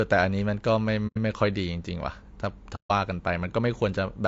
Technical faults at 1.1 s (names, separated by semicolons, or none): low-delay AAC compression; AAC frame loss with muting